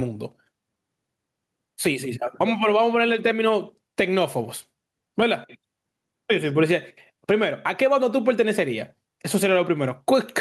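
Gain pumping runs through the whole speech clip: the gain swings by roughly 15 dB, pulled down under each loud syllable, likely from mic gain set far too high with a fast limiter clamping it. The waveform envelope looks flattened. Above it all, content stops near 12 kHz from the call codec.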